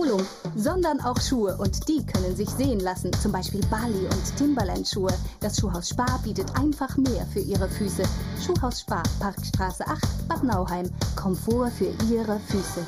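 Channel delay (comb filtering) runs through the whole clip. One channel arrives a fraction of a millisecond behind the other, roughly 0.2 ms, and when the two are folded to mono, whatever they share cancels at evenly spaced frequencies. The lowest notch sits somewhere around 3 kHz, with further notches stacked above it at regular intervals, which leaves the sound hollow and phasey, its upper range thinned by fixed gaps that never move.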